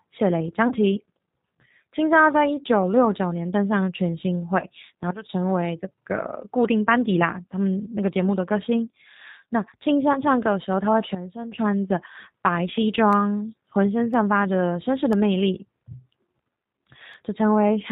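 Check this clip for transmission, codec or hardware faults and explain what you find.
Three faults can be heard: codec damage across the whole recording, three brief concealed packet losses, and a run of regular clicks near the end.

G.729 codec, throughout: The speech sounds narrow, slightly rough and synthetic, with nothing above 4 kHz. That character points to G.729A at 8 kbit/s. This codec models the voice as a vocal tract filter driven by a pitch predictor and a sparse set of pulses in every 10 ms frame, so fine detail in the excitation is lost, and the damage is plainly audible.

VoIP packet loss concealed by the speech codec, at 0.68 to 0.73 s, 4.60 to 4.64 s and 10.13 to 10.22 s: At each point the speech briefly smears into a buzzy tone or coloured noise that fades, and then takes a moment to recover. Each gap fits a single lost 20 ms packet. The decoder fills the hole by extending its last pitch and filter at falling gain. 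Because every frame depends on the one before, the distortion outlasts the gap.

Periodic USB or driver dropouts, from 13.13 to 17.14 s: About five ticks arrive exactly 1.0 s apart, each audible only while speech is present. Each tick is roughly half a millisecond of audio replaced by silence. That regular timing is the signature of a background task blocking the USB bus or the audio driver at a fixed interval, so that a tiny slice of signal goes missing each time.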